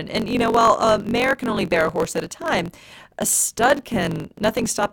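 From start to finish a low buzz at about 46 Hz runs under the speech, which plays roughly 1.07 times too fast. This is a truncated block size mismatch: each block, which fits 1024 samples, loses its tail before the next stage reads it.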